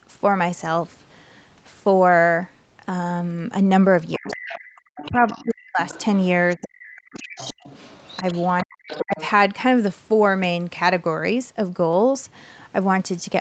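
It's a speech recording, and the trouble is all in the middle. The other side's voice leaks through, faint, about 15 to 20 dB under the talker, at 4.12 to 4.59 s, 4.96 to 5.42 s, 5.86 to 6.03 s and a long stretch from 6.51 to 9.26 s, most likely loudspeaker echo the canceller didn't fully remove. Overlapping that, the talker's speech is suppressed in double talk, dipping by something like 40 dB at its deepest between 4.18 and 5.8 s, 6.56 and 7.63 s, and 8.63 and 9.19 s, likely the canceller ducking everything when both sides talked at once. The band tops out at 8 kHz throughout, which fits an Opus call path at around 32 kbps.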